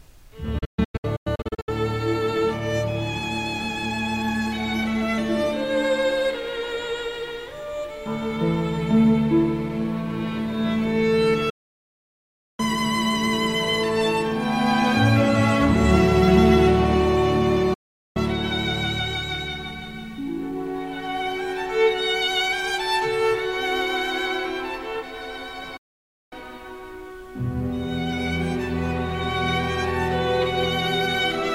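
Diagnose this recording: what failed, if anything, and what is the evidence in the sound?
Digital broadcast dropout at the reception stage: the sound mutes with a quick 8 ms fade at 0.58–1.69 s (scattered holes), 11.50–12.60, 17.74–18.17 and 25.77–26.33 s, as the receiver lost the signal or discarded corrupted frames.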